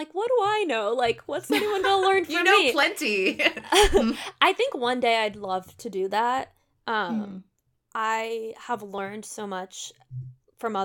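A speech recording with two abrupt discontinuities, at 2.83 s and 8.98 s, each heard as a jump where the sound skips forward with no gap of silence. The first skip loses roughly 20 ms of audio, the second roughly half that. The likely cause is a dropped buffer (overrun): the capture software failed to read its samples before the hardware overwrote them, so that stretch vanished and the audio on either side was spliced together directly.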